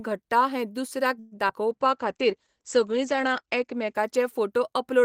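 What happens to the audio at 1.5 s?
At 1.48 to 1.51 s there is a short concealed packet loss. About 20 ms of the speech never reached the decoder in time. The receiver patched the hole by extending the preceding sound, continuing its pitch where it was voiced and shaped noise where it was not. That synthetic fill runs for about 10 ms before the decoder blends back into the real signal. It is heard as a brief smear or wobble, and a short consonant there can drop out.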